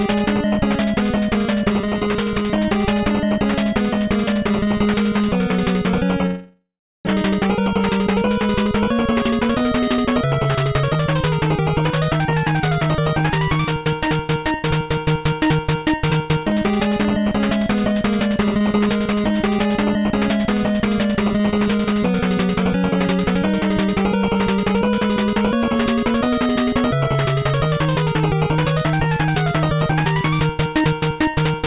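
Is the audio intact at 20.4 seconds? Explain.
Yes, the audio is intact at 20.4 seconds, with no dropout, glitch or distortion at that point beyond the ordinary narrowband sound of the call path, which carries nothing above 4 kHz.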